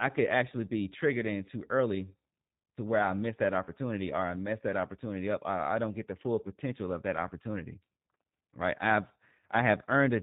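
From start to finish the speech has passed through the G.729 codec, and the sound fits the G.729A variant at 8 kbit/s. Rather than storing the waveform, the encoder keeps a vocal tract filter, a pitch predictor and a few pulses for every 10 ms frame, and the decoder rebuilds speech from these. Everything above 4 kHz is lost, so the speech is band-limited, and the rebuilt voice sounds plainly rough and synthetic while remaining intelligible.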